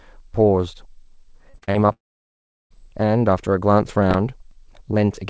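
From 1.50 to 1.91 s there is repeated packet loss with a robotic sound. Five short holes appear, the longest about 40 ms. Each is patched by stretching the previous sound. About 41 percent of this stretch is filled in, so the speech turns choppy and robotic.

At 1.93 s a long network dropout is the likely cause of what follows. The last sound is briefly continued as a fading buzz or hiss. Then about 0.73 s of silence follows. Speech returns at 2.72 s with that portion simply gone.

From 4.11 to 4.51 s there is processor overload crackle. About seven processing deadlines are missed, which fits very short buffers of around 1.5 ms. Each miss replays a sliver of old audio with hard edges. Together they sound like a burst of crackle or gritty tearing over the speech.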